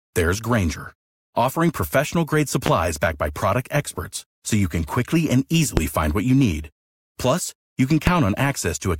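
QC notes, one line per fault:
2.66–2.70 s, 5.77–5.81 s and 8.07–8.11 s, loud pop: A sudden voltage pulse, likely from a plug, switch, static discharge or driver glitch, lands on the signal three times. The later stages shape each pulse into a single sharp pop about 34 ms long, peaking around 20 dB above the speech, which carries on underneath. They fall after "offering professional grade", after "you can quickly and", and after "you can" near the end.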